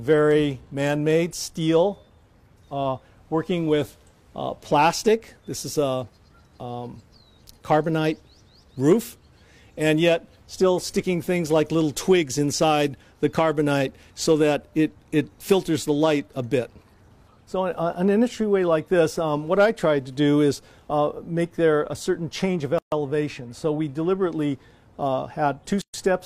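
The audio was encoded in separate pieces and joined without trimming each run's start-up delay and padded final frame, leaving a gap at a join of encoded pieces twice. Silence cuts into continuous sound from 22.78 to 22.92 s (136 ms) and from 25.82 to 25.94 s (123 ms). Each gap has its edges smeared by the codec, and the sound resumes exactly where it stopped.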